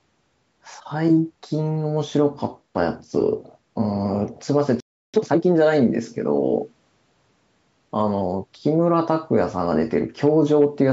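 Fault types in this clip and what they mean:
Playback stall: speech halts for 0.33 s from 4.80 s, likely a starved player, leaving a flat-line gap and blank spectrogram column.
Time-compressed catch-up: from 5.14 to 5.46 s speech runs at twice speed, pitch unchanged; spectrogram shows squeezed, crowded syllables at normal harmonic spacing.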